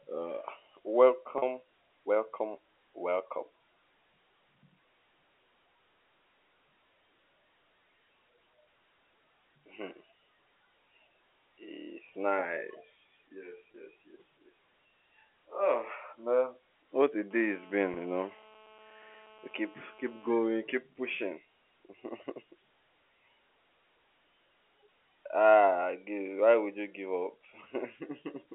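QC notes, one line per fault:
1.38–1.42 s, 13.72 s, 17.94–17.96 s: packet loss with pitch repetition. Gaps of 40 ms, 20 ms and 20 ms, the first consistent with two lost 20 ms packets, are bridged by repeating the last pitch period, giving a brief held, buzzy note. The 13.72 s dropout comes just before "yes yes".
17.31–20.33 s: GSM phone buzz. A hard, raspy buzz at 217 Hz with dense harmonics, about 25 dB below the signal, holds steady, which points to a nearby 2G handset in a call whose transmit bursts are being rectified in the audio circuit. It ends just before "keep pushing".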